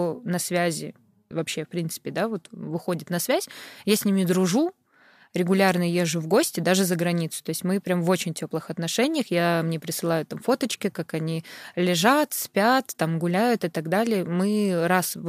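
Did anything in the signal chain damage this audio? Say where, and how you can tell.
No, nothing in the signal chain damaged this audio.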